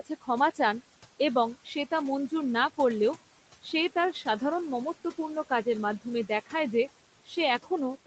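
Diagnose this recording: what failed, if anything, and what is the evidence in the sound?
The call-processing stage's noise suppressor is the culprit throughout the clip. It pulls the steady room noise down by about 17 dB, so the background sinks away in the gaps and comes back up under the speech. All of this rides on the Opus call path, whose band stops at 8 kHz.

At three points, speech cut by the noise suppressor occurs because the same suppressor misreads quiet speech as noise and turns it down with the background. From 0.00 to 0.29 s, just before "চান এবং", the onset drops by up to about 16 dB. From 1.55 to 1.92 s, between "চান এবং" and "তা মঞ্জুর না করলেও", it dips by about 10 dB. From 7.26 to 7.37 s, it falls by about 15 dB. Each time, roughly 0.1 to 0.15 s of sound comes out faint or swallowed.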